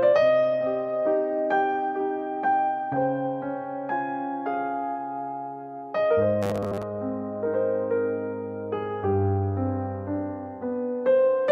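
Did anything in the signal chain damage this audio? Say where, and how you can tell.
Yes. The driver or buffer stage likely ran short of fresh data from 6.43 to 6.83 s, replaying a roughly 10 ms block in place of most of the audio, producing robotic sound from repeated short buffers: a rigid, metallic 100 Hz buzz.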